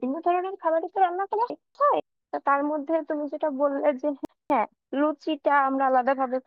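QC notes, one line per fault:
1.5–2.0 s, chunks out of order: a brief jumbled stretch of speech. Two 250 ms chunks play swapped, the first arriving one chunk late, leaving hard joins.
4.25–4.75 s, chunks out of order: the same garbled moment. Again one 250 ms chunk plays one chunk late, after its successor, with abrupt splices at each boundary.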